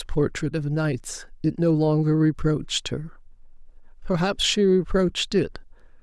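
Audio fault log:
No technical faults are audible anywhere in the speech recording.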